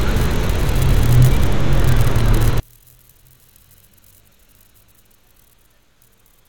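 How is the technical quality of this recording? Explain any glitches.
The recording has one serious fault. From 2.6 s to the end, the sound drops by about 36 dB and nearly disappears. The likely cause is one channel inverted. One stereo side has reversed polarity. When the channels are summed to mono, their shared content cancels. Only a faint remnant of the difference between them remains.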